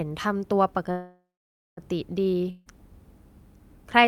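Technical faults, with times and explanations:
0.91–1.80 s, call audio freeze: packets were likely held up in transit, draining the jitter buffer. The receiver stretched the last sound into a fading buzz or hiss, then about 0.53 s of silence. The speech resumes where it stopped, now running 0.86 s late, with nothing lost.
2.50–2.69 s, long network dropout: incoming audio likely stopped arriving, and about 0.16 s of speech was never played. The receiver filled the 0.16 s hole with a fading continuation of the last sound, with no silence, then the speech returns further on, skipping the lost part.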